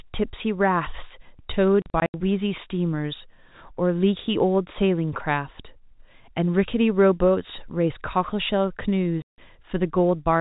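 A speech recording over a phone line that lost packets, with the receiver playing silence in place of each missing one and no concealment. From 1.82 to 2.14 s about 180 ms drops out in holes scattered over 320 ms, the longest run 80 ms, and from 9.22 to 9.38 s a solid 160 ms gap opens. The hole lengths fit 20 ms packets, and each hole has hard edges, cut into the G.711 telephone band, which stops at 4 kHz.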